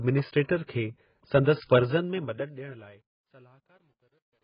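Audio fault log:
Throughout: AAC compression, likely the cause of the heavy codec damage heard. Nothing survives above 5 kHz, so the speech is dull and smeared, with a warbling texture. This points to AAC-LC at a very low bitrate, around 12 kbps, where the encoder drops the highs and leaves spectral holes.
0.43 to 0.49 s and 0.66 to 0.69 s: pre-echo. A short hiss precedes each sharp attack, spreading 56 ms and then 30 ms ahead of the onset. The transform codec spreads quantisation noise across its whole block, so noise meant for the loud attack fills the quiet gap before it, and the attacks sound soft.
1.78 s to the end: truncation distortion on a fade. As the level falls, the waveform collapses into coarse steps and turns gritty, worst from 2.89 s to the end. This fits a fade computed at about 11-bit resolution without dither, so the quietest part is rendered with only a few quantisation steps.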